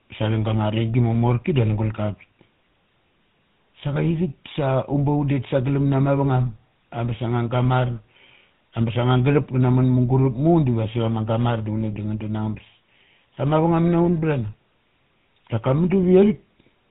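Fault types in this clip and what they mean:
GSM full-rate codec: the whole clip has been through the early mobile-phone speech coder, nothing above 4 kHz, with plainly audible buzzy, gravelly roughness consistent with 13 kbps coding.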